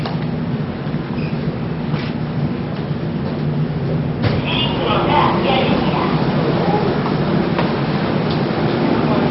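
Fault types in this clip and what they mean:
MP2 compression: The audio is dull, with nothing above 5.6 kHz, and has a heavy gurgling, granular texture as upper bands flicker. The likely cause is MPEG Layer II coding starved of bits, consistent with roughly 32 kbps, switching sub-bands off and coarsely quantising the rest.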